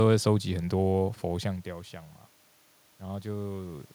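Nothing here points to a technical fault in the speech: the background sound is just the room the microphone sits in, and the level shift around a second and a half in is simply the talker moving relative to the mic.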